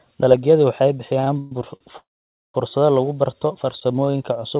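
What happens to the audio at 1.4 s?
At 1.4 s the speech is in the middle of repeated stalls (stutter), running from 1.2 to 1.81 s. Packets arrived late, so the jitter buffer ran dry four times. Each time the receiver held and extended the last sound until fresh audio came. About 223 ms is stretched this way, over a third of the span. The longest hold is 129 ms, and it fades. Nothing is lost, but the speech drags and stutters through the narrowband G.711 sound.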